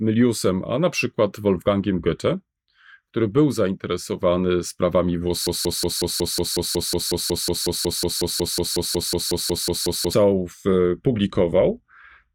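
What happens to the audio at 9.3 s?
At 9.3 s the playback is caught in a broken-record loop that runs from 5.47 s to 10.13 s. The likely cause is a stall in the player, encoder or stream, which kept resending the last fragment it held instead of fresh audio. The result is a 183 ms slice of speech repeating exactly, back to back, 25 times, a rapid stutter. Whatever speech belonged in those seconds never plays.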